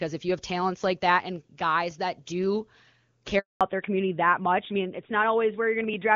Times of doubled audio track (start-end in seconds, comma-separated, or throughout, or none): none